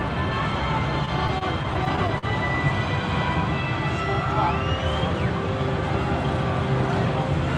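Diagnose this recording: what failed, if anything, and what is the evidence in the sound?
Repeated stalls (stutter) at the network stage, in the receiver's jitter buffer. Between 1.05 and 2.25 s the sound catches and drags about ten times. Each hitch is brief, the longest about 43 ms. Together they add about 150 ms of stretched sound, around 13% of that span. Nothing is lost. Packets arrived late or slower than playback, so the buffer kept running dry. Each time the receiver extended the last sound until data resumed.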